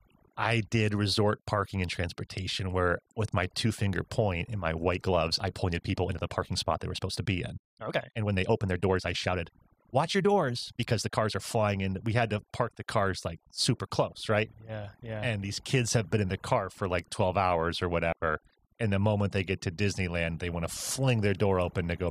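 The whole clip has overdone noise removal: the background sinks to near silence with little twinkling specks. From 4.9 to 11.4 s the pace suddenly jumps to about 1.37 times normal while the pitch stays put, sounding rushed; that's likely a time-stretched section squeezed to fit. At 18.12 s there's a digital wireless dropout, a clean 100 ms hole of near silence with no noise burst around it, where the receiver muted after losing data.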